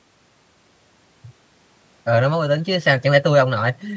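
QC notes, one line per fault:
No faults heard; call processing sounds as expected.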